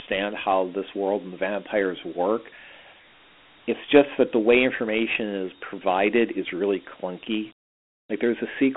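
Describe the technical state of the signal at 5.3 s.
At 5.3 s the speech is still passing through Dialogic VOX ADPCM, which affects the whole clip. The encoder keeps only a 4-bit difference per sample and adapts its step size as it goes, which fits a 32 kbps, 8 kHz stream. That coarse quantisation leaves a plainly audible gritty hiss riding on the speech, while the telephone-style band from 200 Hz to 3.4 kHz, with nothing above 3.8 kHz, makes it sound thin and muffled.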